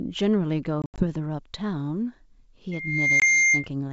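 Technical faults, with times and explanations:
0.82–1.04 s and 3.20–3.23 s, packet loss on an ADPCM call: hard-edged silent gaps, about 120 ms lost over 160 ms (longest 80 ms), then a single 20 ms drop. Speech comes back slightly distorted while the decoder's predictor resyncs.
2.71–3.67 s, loudspeaker feedback squeal: a steady 2.1 kHz tone swells over about half a second to roughly 10 dB above the speech, as the mic-speaker loop runs away at that frequency.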